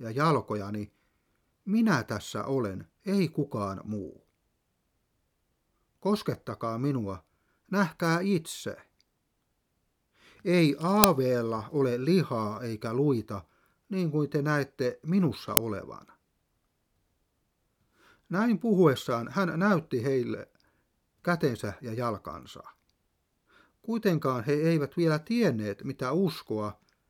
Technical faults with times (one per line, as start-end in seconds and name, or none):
11.04 uninitialised buffer
15.57 uninitialised buffer